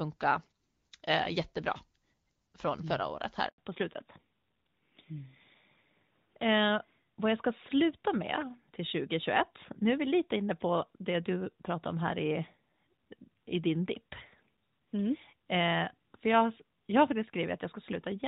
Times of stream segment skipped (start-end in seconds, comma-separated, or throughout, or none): none